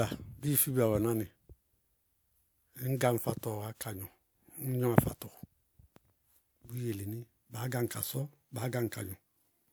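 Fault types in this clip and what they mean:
No technical faults can be heard in this speech recording. There is nothing here that calls for a line of its own.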